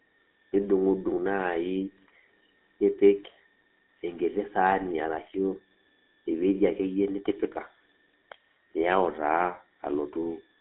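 From start to finish a switching supply whistle sits under the speech: a thin, high tone that wanders between about 1.73 and 1.89 kHz, faint and well below the voice. A switching power supply running in an audible burst mode or beating with another supply puts this tone into the signal. On a spectrogram it shows as a narrow horizontal line near 1.8 kHz, bending slightly up and down across the whole clip.

The speech also carries the sound of the GSM full-rate codec throughout, and the damage is plainly audible: a buzzy, gravelly roughness on the voice, which fits the 13 kbps original GSM coder. That codec models the vocal tract and excites it with a sparse, regular pulse train, so fine detail is replaced by coarse buzz. The band runs only from about 250 Hz to 3.5 kHz, and a spectrogram shows empty space above and below it.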